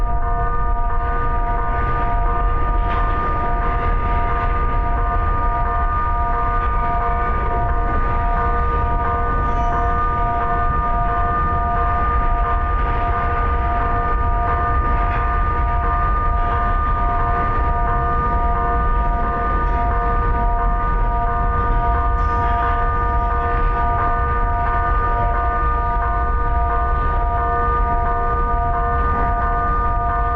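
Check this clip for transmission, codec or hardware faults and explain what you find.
One fault is present, lasting the whole clip. Stereo read as mono, start to end: alternating left and right samples were read in sequence as one channel, doubling its length. The audio therefore plays at half speed, 0.5x, a full octave (12 semitones) low, sounding slowed and deepened, with a faint mirrored image in the upper spectrum.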